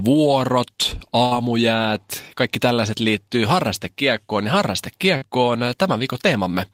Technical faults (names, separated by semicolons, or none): burst of packet loss; short concealed packet loss